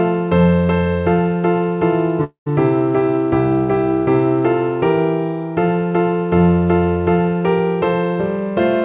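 A long network dropout runs from 2.24 to 2.48 s, most likely from packets failing to arrive over the call's network path. About 0.22 s of audio is missing. The receiver stretches the last sound it had into a fading buzz or hiss, which thins to silence for roughly the final tenth of a second. The audio resumes at 2.48 s without the lost portion, still band-limited to 4 kHz by the G.711 mu-law call path.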